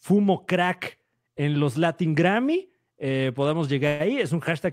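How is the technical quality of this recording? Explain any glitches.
There's one clear glitch in this speech recording. From 3.87 to 4.02 s there's a burst of packet loss: roughly 120 ms of audio never arrived, so the receiver stretched out the last sound for about 120 ms and faded it down. You hear that smeared tail, then the talk jumps ahead with that chunk gone.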